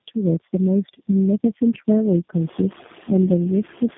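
From the start, the speech carries noise suppressor artifacts. The suppressor estimates the steady noise in each frequency band and pulls those bands down, frame by frame. Here it lowers the noise by only about 2 dB, so the effect is mild. The background dips a little in the gaps and comes back under the speech. Around 2.5 s the room noise rises by about 25 dB and sits about 18 dB below the speech.

Tandem speech coding runs through the whole clip. The signal was decoded and coded again at each link, so every coder worked on damaged audio from the one before. Three low-rate speech coders in a row can be heard. The sound points to a chain of AMR-NB stages ending in G.729A. The speech is rough, warbly and muffled. Nothing is left above 3.6 kHz.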